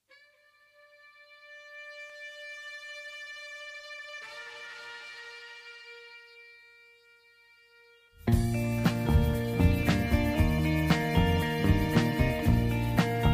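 At 2.10 s the stream most likely lost a handful of dropped samples, a tiny fraction of a millisecond, so the waveform leaps straight to a later value. Nothing audible goes missing; instead a single sharp click cuts through the sound.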